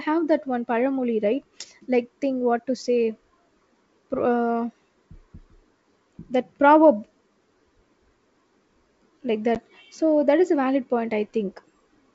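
At about 9.55 s, just before "so that", there's a bit of packet loss on an ADPCM call: about 10 ms of audio drops out, which fits roughly one lost packet, and the gap is filled with silence, so you hear a hard-edged hole. The decoder's predictor and step size have drifted from the sender's, so when the speech returns it comes back slightly distorted, settling by about 9.58 s. The G.722 wideband coding underneath, sounding like the full 64 kbit/s mode, adds just a faint hiss up top.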